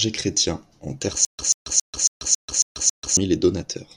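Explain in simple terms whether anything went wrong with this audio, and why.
Stutter with silent gaps, 1.25 to 3.17 s: a 0.14-second fragment repeats seven times between silences, likely from stalled playback, so that stretch of speech is lost.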